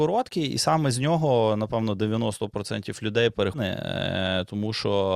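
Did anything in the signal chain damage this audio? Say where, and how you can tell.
Yes, at the playback stage. At 3.53–3.58 s the speech jumps ahead with a small blip. This is likely a stream segment skipped after failing to load.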